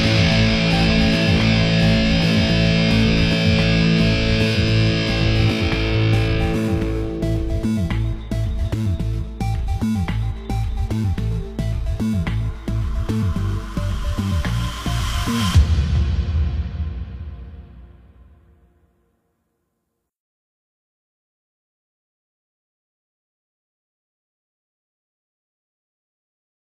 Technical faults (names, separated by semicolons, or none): compressed frames skipped